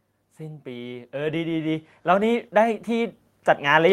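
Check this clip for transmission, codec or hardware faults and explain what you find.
There's one fault: automatic gain rising, from about 0.37 s to the end. The AGC decided the input was too quiet and kept pushing the gain up, so speech and background swell together.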